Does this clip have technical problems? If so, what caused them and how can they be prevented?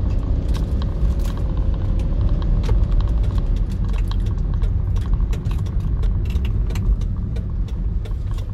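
Yes. From 1.43 to 2.17 s the sound slows by 5.8% and drops about a semitone (−103 cents), then snaps back. From 6.23 to 7.49 s it speeds up 5.8%, rising about 98 cents. Both are likely a drift correction step, where clock-matching software briefly shifted the playback rate to rebalance its buffer. Using a shared clock, or gradual resampling-based correction, prevents this.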